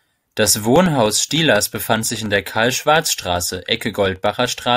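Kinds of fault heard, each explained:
Periodic USB or driver dropouts: Something keeps stalling the USB link or the audio driver on a fixed clock, and each time a sliver of the speech, roughly a millisecond, gets dropped and replaced with silence. Here it happens every 0.1 s, so about ten times a second from 0.06 s to 4.66 s, around fifty tiny gaps in all. You hear them as a steady ticking riding on the speech, only audible where there's signal.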